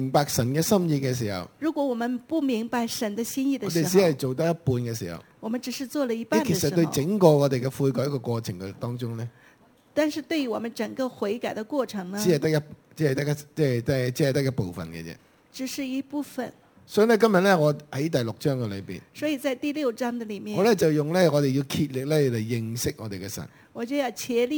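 Throughout the clip there is imaging from sample-and-hold upsampling: the audio was raised to a higher rate by holding each sample, with no smoothing filter. Mirrored copies of the spectrum result, the first spanning 11 to 22 kHz at about -23 dB, which fits an original rate near 22 kHz. Unlike steady hiss, this metallic fizz rises and falls with the sound, and its lowest copy moves opposite to the pitch.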